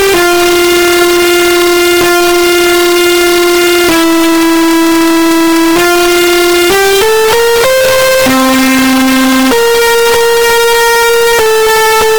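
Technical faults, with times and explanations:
throughout, float read as integer: the audio was likely stored as 32-bit float but read back as 32-bit integer, so each sample's sign and exponent bits, not its true amplitude, decide the value. The waveform collapses into a near-square shape at an almost fixed, high level regardless of how quiet the original was, which makes the whole clip very loud and harsh, with background noise raised to the same level as the main sound.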